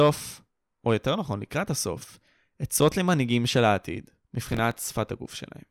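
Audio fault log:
4.52–4.88 s: processor overload crackle. For about a third of a second the speech turns gritty and torn, as the processor repeatedly misses its deadlines for very short buffers, around 5 ms each and roughly ten in all. Each miss repeats a scrap of old audio with hard edges, so the clicks pile into a rough burst. Unlike a single dropout or clean gap, this is a dense run of tiny faults that stops once the load eases.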